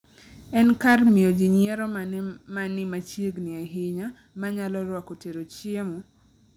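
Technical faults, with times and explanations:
0.58–1.13 s, microphone overload: the input level was likely set too high, so the speech peaks ran about 4 dB past the converter's ceiling and had their tops sheared flat. Around one sample in twenty is clipped, giving the loudest syllables a harsh, crackling edge.
0.64 s and 1.65 s, microphone volume stepped down: the speech and background fall abruptly in level, first by about 4 dB right inside the distorted stretch, then by about 10 dB. This is likely the call software reacting to the overload by cutting the device's input gain in single steps.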